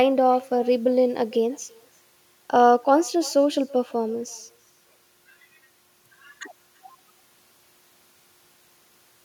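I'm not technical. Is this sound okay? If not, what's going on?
No. There is echo with no canceller, present throughout the whole clip. Everything spoken comes back about a third of a second later as a much quieter, thinner copy. This happens when the person at the other end plays the call through a loudspeaker: their microphone picks the sound up again and sends it back across the network, and nothing on their side removes that returning copy before it reaches you.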